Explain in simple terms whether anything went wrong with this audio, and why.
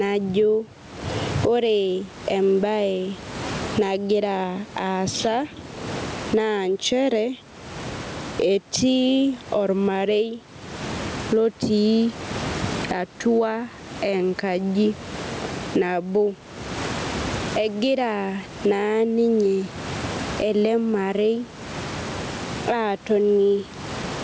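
Something did go wrong: the recording has gain pumping from start to finish. The level is pulled down each time the speech gets loud. Loud and quiet moments end up closer in volume, which makes the speech sound squashed. The likely cause is a microphone level set far too high, with an automatic limiter hauling it back down on every loud sound.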